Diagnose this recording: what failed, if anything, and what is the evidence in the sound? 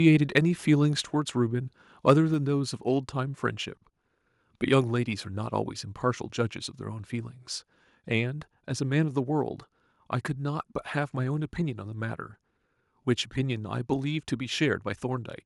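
Microphone overload at the converter stage: brief harsh crackles at 0.36 to 0.38 s and 2.09 to 2.11 s, with peaks about 2 dB beyond full scale. The waveform shows flattened tops on a small share of samples, and the spectrogram shows broadband smears at those instants. The likely cause is excessive input gain.

Microphone volume stepped down, likely in call processing: at 1.02 s, shortly after the first distorted peak, the sound and background fall together by about 4 dB in one step. On a waveform the envelope drops abruptly, and a spectrogram dims evenly across all frequencies.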